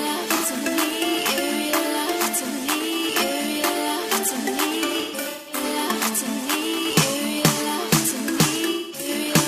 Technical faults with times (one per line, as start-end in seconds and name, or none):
0.33-0.47 AAC frame loss with concealment
4.87-5.62 AAC frame loss with concealment
8.71-9.08 AAC frame loss with concealment